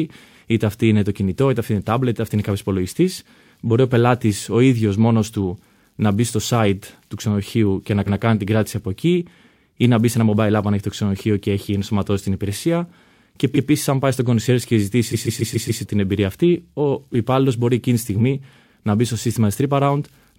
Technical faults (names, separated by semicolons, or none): repeated frames